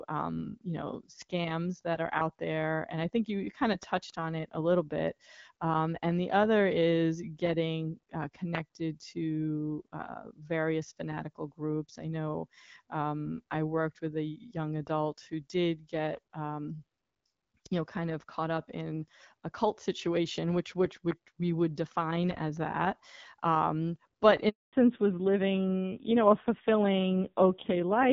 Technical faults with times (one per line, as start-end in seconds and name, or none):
24.49-24.73 handover gap
24.73-28.13 fallback to narrowband